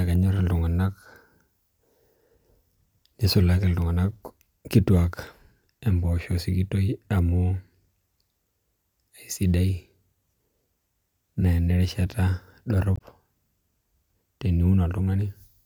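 At 12.95 to 13.01 s the speech breaks into a brief glitch from damaged data in the compressed stream: the decoder misreads corrupt frames, loses sync and searches for the next frame header. A spectrogram shows a discontinuity at that point.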